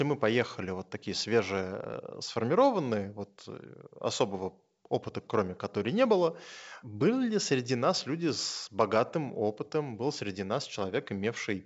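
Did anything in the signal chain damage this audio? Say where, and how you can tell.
No, nothing in this speech stood out as damage from any stage of the chain when I listened.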